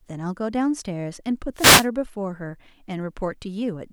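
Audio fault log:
1.55–1.88 s, wireless microphone noise hit: a short swish of static rises over the speech for about a third of a second, then clears. The FM radio link fades as reflected signals cancel. Receiver noise climbs.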